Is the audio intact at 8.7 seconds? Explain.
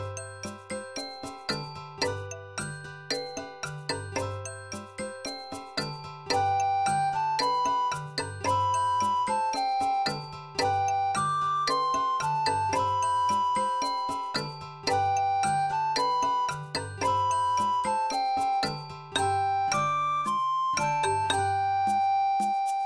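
Yes, the audio is intact at 8.7 seconds, with no dropout, click, distortion or other fault to be heard at that moment.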